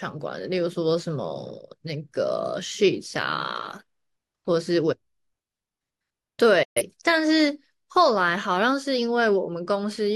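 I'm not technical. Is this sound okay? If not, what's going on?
No. There's a digital broadcast dropout: the receiver briefly lost the signal or received corrupted frames and muted, so the speech snaps to silence from 6.63 to 6.82 s.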